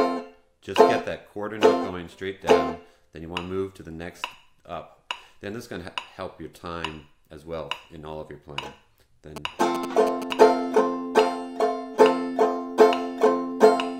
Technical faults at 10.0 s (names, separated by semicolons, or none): GSM signalling bursts